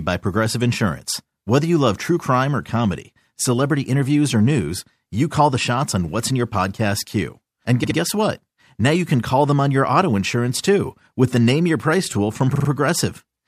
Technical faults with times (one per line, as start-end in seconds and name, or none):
7.83-7.97 repeated frames
12.54-12.68 repeated frames